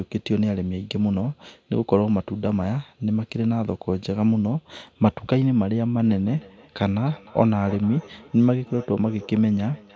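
Feedback echo between two devices starts at 6.04 s and runs to the end of the clip at 9.96 s. A second device in the same room is playing the call aloud, and the first microphone picks that playback up again. Its echo canceller only removes its own device's output, so the returning speech passes through. The speech comes back roughly every 0.3 seconds, sounding thinner and more ringing, at about 21 dB below the direct speech.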